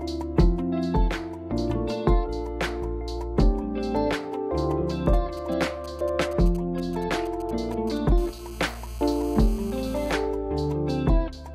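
GSM signalling bursts from 5.06 to 7.98 s: a nearby 2G phone's short radio bursts at 217 Hz are rectified, giving galloping ticks and brief buzzes roughly 25 dB below the audio. GSM phone buzz from 8.18 to 10.12 s: a steady, raspy 217 Hz buzz rich in harmonics, about 23 dB below the audio, as the phone transmits in bursts 217 times a second during a call.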